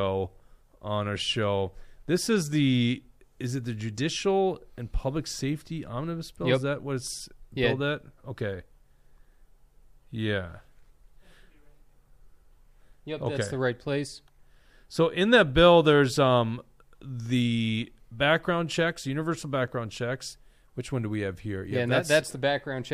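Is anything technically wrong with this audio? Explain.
No, the recording has no technical faults: the signal stays stable and continuous throughout, with nothing in it that points to a problem in capture, processing or playback.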